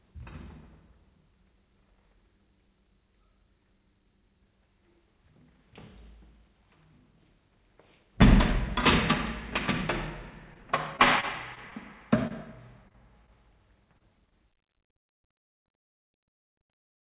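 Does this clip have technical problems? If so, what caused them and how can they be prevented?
Yes. Repeated packet loss (robotic sound) runs from 10.54 to 11.73 s and again from 12.88 to 13.54 s. Packets kept arriving late or not at all, and each hole was patched by extending the previous sound, giving a choppy texture with pieces missing. To prevent this, use a more stable network link with less jitter, or a larger jitter buffer.

Short concealed packet loss occurs at 12.27 to 12.32 s, 13.98 to 14.02 s, and 14.26 to 14.33 s. In each case a few hundredths of a second never arrived. The receiver bridged the gap with a continuation of the last sound, which leaves a brief smear or wobble. Forward error correction or redundant packet transmission would prevent these isolated dropouts.

Throughout the clip, the sound stops at 4 kHz. This band limit fits G.711 telephone-grade coding on the call path.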